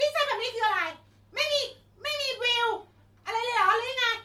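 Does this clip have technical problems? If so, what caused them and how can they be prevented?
Yes. The speech carries generation loss from start to finish: a swirly, smeared texture with a hollow, watery top end, and consonant attacks that sound blurred rather than crisp. The likely cause is repeated lossy encoding, with the audio decoded and re-encoded around five times in a chain that sounds like MP3 at about 96 kbit/s. Each pass quantises on a shifted frame grid, so the errors and spectral holes accumulate. To prevent it, edit and store from a lossless master and encode to MP3 only once, at the final export.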